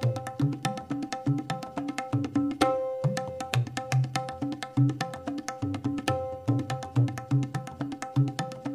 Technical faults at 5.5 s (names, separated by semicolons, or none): none